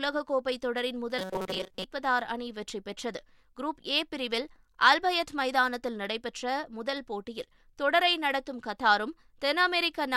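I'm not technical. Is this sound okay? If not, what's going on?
No. From about 1.19 to 1.84 seconds the voice turns into a stiff, metallic buzz, a robotic sound from repeated short buffers. The buzz sits at around 188 Hz. The likely cause is audio arriving too slowly, so the software kept replaying a tiny sliver, about 5 milliseconds long, for most of that stretch. The real sound in between was skipped.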